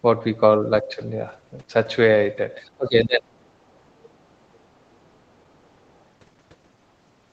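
From 2.65 to 3.33 s, the talker's speech drops sharply, by around 25 dB at its deepest. The affected stretch adds up to roughly 0.7 s. The sound thins and partly cuts out, then recovers. This is speech suppressed in double talk. Both ends were likely talking at once. The echo canceller could not tell the local voice from the loudspeaker echo. So it turned everything down together.

From 4.55 to 4.59 s, a brief scrap of a second voice comes through. It is very faint, around 40 dB below the talker. It lasts only a few hundredths of a second. This is the other side's voice leaking through. The far end likely plays on a loudspeaker and reaches the microphone. The echo canceller missed this small piece. The whole clip is band-limited to 8 kHz by the Opus call path.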